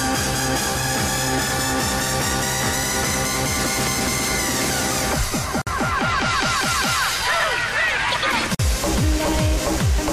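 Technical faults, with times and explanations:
5.62–5.67 s and 8.55–8.59 s, gap at a join of encoded pieces: the audio was encoded in separate pieces that were joined end to end without trimming, so each join keeps the encoder's start-up delay and the padding of the previous piece's final frame. The result is a hole of about 52 ms and then 47 ms in otherwise continuous sound, with smeared edges, after which the sound resumes exactly where it stopped.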